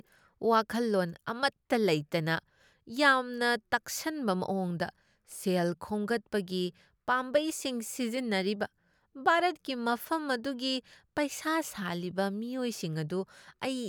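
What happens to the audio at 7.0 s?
Nothing goes wrong at 7.0 s; the speech carries on intact through that moment with no dropout, click or distortion.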